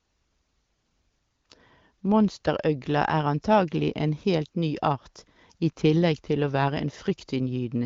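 No technical faults occur in this speech clip, so there are none to describe in time order.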